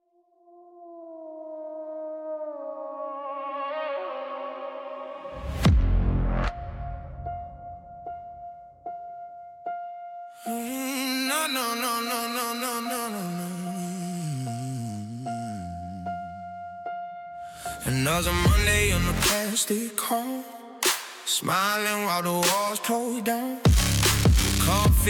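No technical faults can be heard anywhere in this audio; the signal stays intact and continuous throughout.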